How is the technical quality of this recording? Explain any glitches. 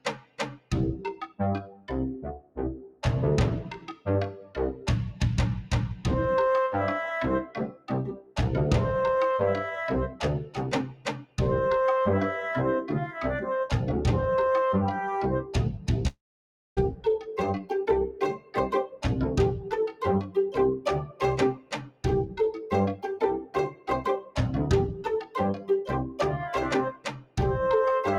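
The technical quality is poor. A speech-oriented noise suppressor is processing the whole clip and repeatedly pulling the sound down, and one network dropout leaves a gap.

Throughout the clip, a noise suppressor is applied to the music or sounds. It treats steady, sustained material and decaying tails as noise and attenuates them, while transients pass more or less intact. The gain therefore keeps moving, with a swing of around 15 dB. The result is audible pumping and a thinned, unstable body, because sustained sound never holds a consistent level.

At specific points the noise suppressor cuts the sound much harder: 0.0–3.03 s, 3.75–6.05 s, 7.45–8.38 s, 10.11–11.38 s, 15.44–19.04 s, 19.60–24.37 s, 24.92–26.20 s and 26.92–27.38 s. The deepest drops reach about 17 to 19 dB. Within each stretch the suppressor classifies what it hears as noise and ducks it, so held or fading sound sinks or has its decay chopped. 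Brief attacks come through less affected, which leaves the texture hollow and gated.

From 16.07 to 16.79 s, inside one of the suppressed stretches, there is a long network dropout. This is likely a loss of incoming packets. About 0.7 s of audio is missing. The receiver briefly extends the last sound as a fading buzz, then roughly 0.6 s of near-silence follows. Playback resumes after 16.79 s without the lost portion, so the material jumps ahead rather than continuing smoothly.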